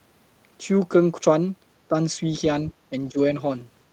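Speech clip with two brief dips in level, at 1.89–1.94 s (a shallow drop of around 5 dB) and at 3.11–3.18 s (around 10 dB), likely speech suppressed in double talk by an echo canceller. On a spectrogram each shows as a short, dimmed vertical band.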